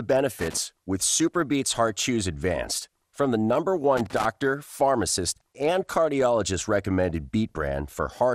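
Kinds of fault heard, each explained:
MP2 compression: The speech was likely passed through MPEG Layer II coding at a low rate, consistent with about 80 kbps. With too few bits, upper sub-bands are switched off and the rest are coarsely quantised, so the whole clip sounds dull, with plainly audible gurgling, granular distortion.
Loose connector crackle: A worn or dirty contact in the signal path is making and breaking contact rapidly, chopping the signal into uneven fragments. This is heard as two irregular bursts of scratchy crackle, from 0.39 to 0.59 s and from 3.97 to 4.25 s.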